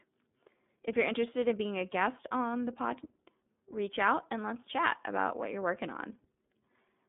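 From start to end the speech carries iLBC codec damage that is plainly audible. The band is confined to roughly 200 Hz to 3.6 kHz, and each 30 ms frame's excitation is coded on its own, which fits the codec's 13.33 kbps mode. That independent coding gives a steady rough, slightly synthetic buzz. Unlike a simple telephone band-limit, the texture itself is degraded, and unlike packet loss, nothing drops out.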